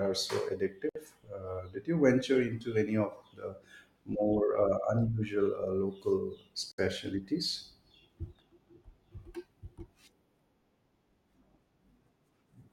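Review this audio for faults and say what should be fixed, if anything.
Two gaps at a join of encoded pieces interrupt the speech, at 0.89–0.95 s (61 ms) and 6.72–6.78 s (66 ms). Separately encoded segments were joined with each run's start-up delay and final-frame padding left in. Unlike a dropout, nothing is lost: the speech resumes exactly where it stopped, and the codec smears the edges of each gap. Trim encoder delay and padding, or encode the material in one gapless pass, before joining.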